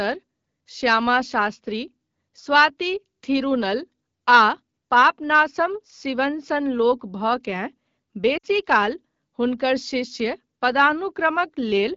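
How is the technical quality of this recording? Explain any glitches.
The recording has one audible glitch, a brief dropout in the speech, heard over the light coloration of the AMR wideband (HD Voice) codec at 12.65 kbit/s.

Lost AMR speech frames, from 8.37 to 8.45 s: a 60 ms gap, which fits a run of about three 20 ms frames, failed their error check after radio corruption. The decoder bridged it by repeating the last good pitch and vocal tract settings at falling gain, so the sound smears briefly and fades toward silence before normal decoding resumes.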